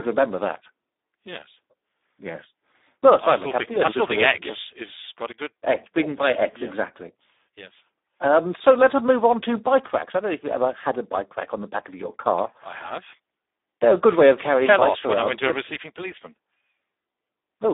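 Throughout, Speex codec damage is heavy: the sound, confined to about 250 Hz–3.7 kHz, turns noisy and hoarse, fitting roughly 8 kbps, with a spectrogram empty above 3.8 kHz.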